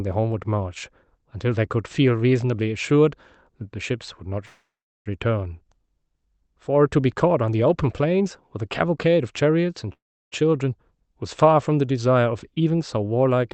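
Speech that stalls twice in a call audio freeze, at 4.45 to 5.09 s and again at 9.93 to 10.35 s. Each time the last sound is stretched into a fading buzz before about 0.38 s and then 0.33 s of silence, and the speech resumes exactly where it stopped, now running about 0.6 s and 0.39 s late. This is likely a jitter buffer running dry while packets were delayed. On a spectrogram, each event shows a smeared, decaying tail and then an empty gap. On the waveform, it appears as a tapering envelope followed by a flat line.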